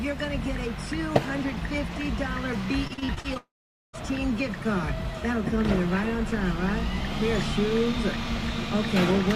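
From 2.87 to 3.37 s the audio turns choppy, the sound of repeated packet loss (robotic sound). Short holes follow one another closely, none longer than 38 ms. Each is bridged by stretching the last fragment, and about 36% of that half-second is patched rather than real. What sets it apart from a single dropout is this rapid stutter: sound keeps returning between holes, so it reads as a choppy texture, not a gap.

At 3.37 s the stutter gives way to a sustained gap lasting until 3.95 s, likely a long network dropout. The final fragment is drawn out into a brief fading buzz or hiss, and then about 460 ms of near-silence follows. When sound resumes, roughly 0.56 s of material is simply absent. Unlike the choppiness before it, there is no alternation here, just one continuous hole that skips ahead.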